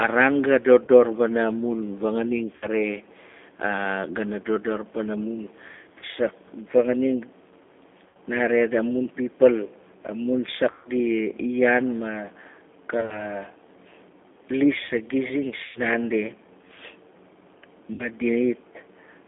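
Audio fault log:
Throughout: G.729 codec. The speech is squeezed into a telephone band of roughly 250 Hz to 3.5 kHz, which fits the 8 kbit/s G.729A coder. Each frame is rebuilt from a vocal tract filter, a pitch predictor and a few pulses, so the speech comes out plainly rough and slightly synthetic. Unlike a simple low-pass filter, the damage is a grainy, buzzy texture on the speech itself, not just missing treble.
0.85–0.90 s, 2.55–2.67 s, 5.99–6.05 s, 8.08–8.16 s, 10.71–10.90 s, 12.97–13.28 s, 15.64–15.81 s, 17.93–18.08 s: VoIP packet loss concealed by the speech codec. The first gap comes between "raan ga" and "wana mun fanganing", another after "gana dodor wana mun", and the longest, about 140 ms, after "nare amun pipal amun". In each gap the decoder repeats its last pitch and filter at falling gain, so the sound smears into a fading buzz rather than going silent. The 12.97 s event is broken into short bursts over about 120 ms. 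Because each frame builds on the previous one, the speech stays weak for a moment after each gap. That lingering effect distinguishes these events from plain dropouts.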